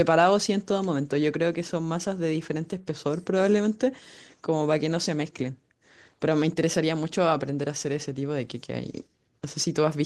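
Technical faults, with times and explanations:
No technical faults can be heard in this speech.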